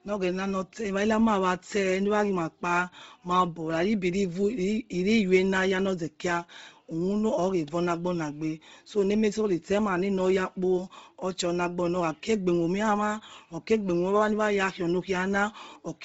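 From start to finish the speech is hard band-limited, with nothing above about 7.7 kHz, and the upper range that remains sounds breathy and grainy. That is likely Bluetooth LC3 compression at a low bitrate, where the codec discards much of the high spectrum and fills the gaps with noise. The noise fill separates it from a plain low-pass filter, which would sound dull but clean, and the coding fits roughly 7.5 ms frames at around 24 kbps.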